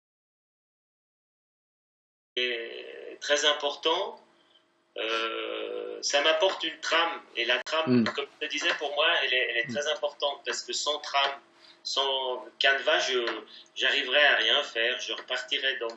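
Audio dropout to silence fills the opening 2.36 s. It is silent with no room tone, unlike a quiet pause, likely from a lost input.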